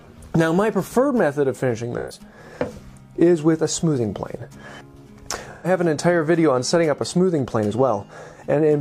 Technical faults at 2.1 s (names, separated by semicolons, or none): AAC frame loss with concealment